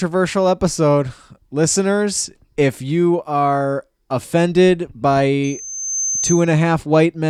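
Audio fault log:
5.43 to 6.52 s, loudspeaker feedback squeal. Just after "if you are offended", a single tone near 6.2 kHz rises out of the speech. It swells over roughly half a second into a thin, piercing whistle. It sits about 5 dB below the speech. The microphone is picking up the loudspeaker it feeds. At this one frequency the loop's gain passes unity, so the tone grows by itself on each trip round.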